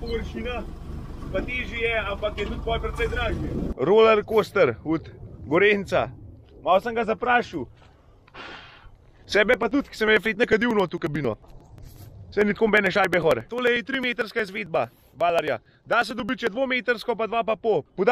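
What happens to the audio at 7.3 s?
Nothing goes wrong at 7.3 s; the audio carries on intact through that moment.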